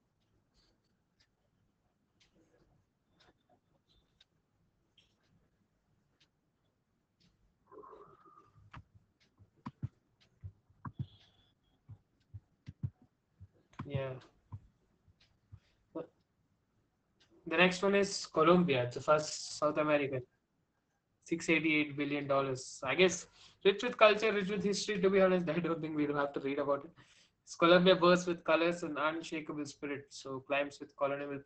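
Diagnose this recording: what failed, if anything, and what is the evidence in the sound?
The codec stage failed: Opus voice compression runs throughout. The speech is muffled, hoarse and faintly robotic, with nothing above about 8.7 kHz, which fits SILK coding at around 10 kbps. Its coarsely coded excitation roughens the voice, which a plain low-pass filter would not.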